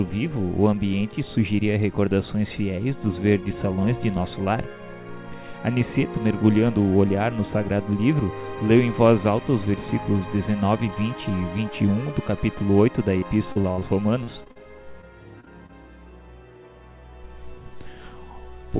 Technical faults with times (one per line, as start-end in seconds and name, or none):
13.18-13.83 repeated packet loss (robotic sound)
14.23-15.04 repeated packet loss (robotic sound)
15.40-15.71 short concealed packet loss